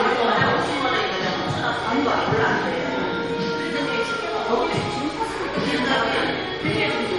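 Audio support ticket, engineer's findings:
Likely MP3 compression, whole clip. Encoder starved of bits, consistent with a bitrate near 44 kbps. Treble cut hard, nothing above 11.1 kHz, so the sound loses its top end. Weak frequency lines dropped frame to frame, leaving plainly audible codec damage throughout the sound.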